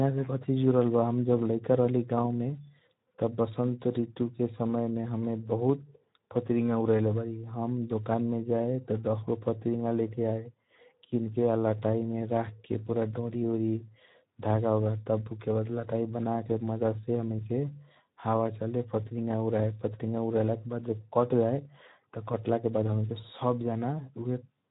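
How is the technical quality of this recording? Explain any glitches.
The quality is clearly compromised by low-rate Speex codec damage throughout. Too few bits reach the CELP excitation, a level consistent with about 11 kbps, so the speech sounds hoarse and noisy, and the band stops at 3.8 kHz, leaving a dull, narrow tone.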